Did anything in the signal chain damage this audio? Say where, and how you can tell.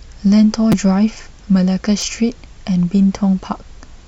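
Yes. A repeated buffer at the driver or buffer stage occurs at 0.72 s and 2.01 s. Each time, a roughly 6 ms slice plays three times with hard joins, giving a brief buzzy click. This fits a 256-sample buffer replayed when fresh audio arrived late.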